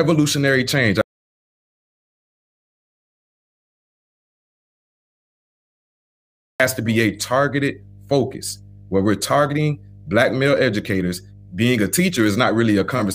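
A steady mains hum runs under the speech from the first moment to the end. It is a low, constant tone at 50 Hz, sitting roughly 25 dB below the speech, with some low harmonics. Power-line energy is leaking into the signal path, typically through a ground loop between connected equipment or magnetic pickup from a nearby transformer. The hum stays fixed in pitch and level and is most exposed in pauses.

At 1.01 s the audio drops out to silence and stays dead until 6.60 s, a gap of about 5.6 s. The gap is silent: the hum and all room tone vanish along with the speech, then everything resumes abruptly mid-flow. The likely cause is the input being lost, through a disconnected device, a failed link or a stray mute, while the recorder kept writing silence. Whatever was said in that stretch is unrecoverable.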